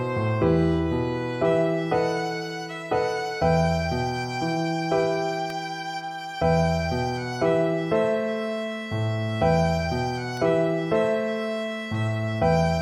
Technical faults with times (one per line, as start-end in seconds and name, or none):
5.50 electrical switching spike
10.37 electrical switching spike